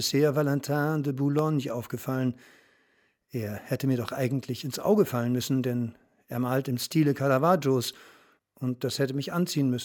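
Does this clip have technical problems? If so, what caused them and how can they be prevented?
Yes: a single loud pop at 1.39 to 1.41 s jumps well above the speech, which continues underneath. It is likely a voltage spike from a plug, switch or static discharge. Prevent it by connecting and switching equipment before recording, and by grounding yourself against static.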